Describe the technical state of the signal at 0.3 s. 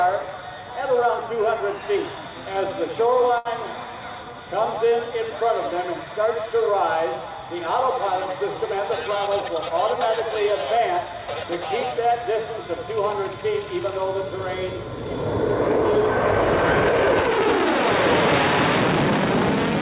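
At 0.3 s the signal is intact with no fault present, and what can be heard there is simply the ordinary character of the WebRTC call path, which carries nothing above 4 kHz.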